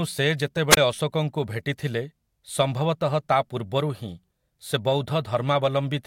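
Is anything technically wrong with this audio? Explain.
Yes. At 0.70 to 0.77 s there is a wireless microphone squelch dropout. The radio signal from the analogue FM microphone fades, so the receiver's squelch mutes its output. A brief burst of hiss leads into a 22 ms hole of near silence before the speech returns.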